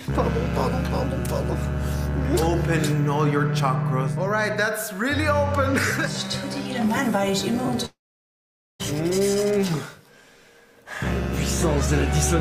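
From 7.85 to 8.81 s the audio stops. The last sound briefly carries on and fades, and silence follows for about 0.84 s. This is likely a long network dropout. Unlike a mute or pause, playback resumes later in the material, with about 0.94 s lost rather than delayed.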